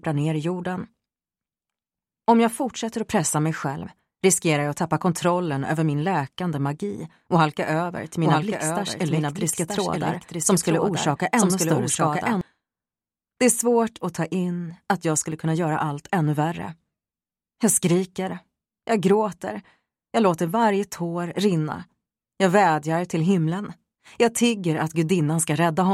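A doubled audio track runs from 7.97 s to 12.41 s. A second copy of the sound sits about a second behind the original and about 5 dB quieter. It is full-band and dry, with no decay or room colour, so it reads as a clean, late repeat rather than an echo. The likely cause is the same signal arriving again through a slower capture path. The copy appears and disappears abruptly at both ends.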